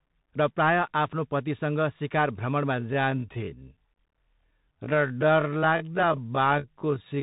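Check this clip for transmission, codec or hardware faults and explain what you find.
Two problems show up here. Throughout, there's a Bluetooth CVSD headset codec sound: nothing above about 3.8 kHz, scratchy sibilants and a grainy hiss from the one-bit delta coding, which fits a 64 kbps CVSD link. From 2.72 s to the end, right after "आफ्नो पतिसँग सिकार", there's a time-stretched section. The pace drops to about 0.55× while the pitch holds, so the speech drags, likely from software repeating short chunks to pad the length.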